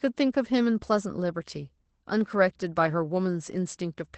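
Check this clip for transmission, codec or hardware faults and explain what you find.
One codec fault runs through the whole clip. Opus voice compression cuts the band at 8.7 kHz and coarsely codes the excitation, which fits SILK at about 12 kbps. The speech sounds muffled, hoarse and slightly robotic, which a simple low-pass filter would not produce.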